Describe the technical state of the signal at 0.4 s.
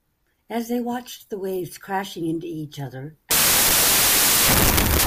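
At 0.4 s the speech signal is intact, with no audible fault at that moment.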